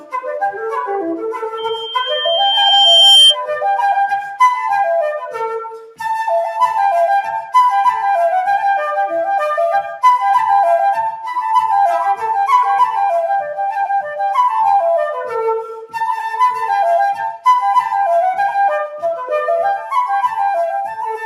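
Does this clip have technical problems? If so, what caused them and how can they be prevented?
Yes. From 5.83 to 6.0 s, the sound is cut by the noise suppressor. It mistook this brief stretch for noise and turned it down, about 10 dB at the deepest point. Easing the suppressor's strength or lowering its threshold prevents this.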